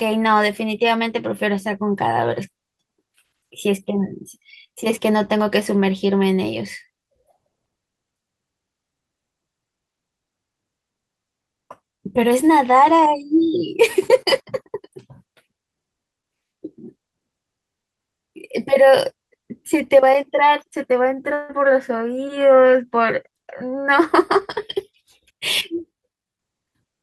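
A long network dropout, most likely, occurs from 21.33 to 21.51 s. For about 155 ms the receiver has no incoming audio, so it keeps extending the last bit of speech as a buzzy, fading tone instead of falling silent. Normal speech then resumes, but the roughly 160 ms that never arrived is skipped, so the talking jumps slightly ahead with a small piece missing.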